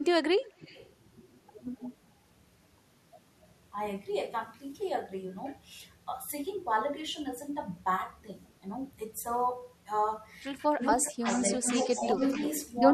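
This speech recording has an echo leak. A delayed copy of the talker returns about a quarter second late. It runs from 0.42 to 0.94 s, about 25 dB down, and as a faint scrap at 1.78 to 1.83 s. From 10.84 to 12.51 s it returns at 270 ms, only about 10 dB down. The likely cause is a loudspeaker-side echo canceller passing residual echo back. There is also speech suppressed in double talk. The voice dips sharply, around 35 dB at its deepest, between 10.7 and 11.3 s. It dips more mildly, around 10 dB, between 11.69 and 12.42 s. Each stretch loses roughly 0.3 s. The echo canceller likely mistook overlapping speech for echo and turned it down.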